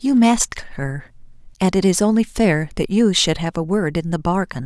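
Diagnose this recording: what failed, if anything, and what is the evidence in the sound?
Nothing failed; no audible fault appears anywhere in the recording.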